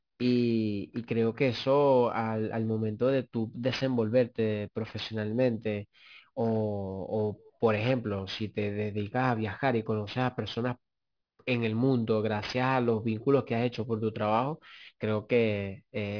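Aliasing runs through the whole clip. The speech appears to have been resampled downward without an anti-aliasing filter, consistent with a drop to about 11 kHz, so content above 5.5 kHz folds back as wrong pitches, sitting roughly 20 dB down and making sibilants sound gritty and metallic.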